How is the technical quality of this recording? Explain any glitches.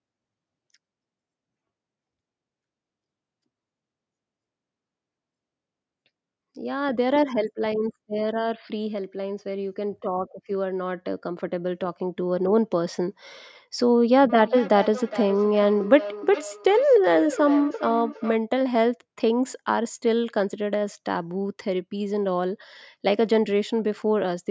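The recording has one clear glitch, a feedback echo between two devices, from 14.29 to 18.42 s. Two devices in the same room seem to be on the call, and one plays out what the other's microphone sent, so that microphone captures it again. Each echo canceller removes only its own device's playback, so the loop survives. The speech returns at a steady interval of roughly 0.4 s, each pass thinner and more ringing, peaking at about 12 dB below the speech.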